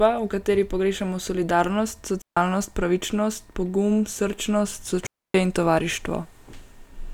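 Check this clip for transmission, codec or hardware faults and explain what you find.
Two digital wireless dropouts occur, at 2.22 to 2.37 s and 5.07 to 5.34 s. Each time the radio link loses too much data, so the receiver mutes with a very fast fade, leaving clean holes of near silence, about 150 ms and 280 ms long, with no noise burst around them.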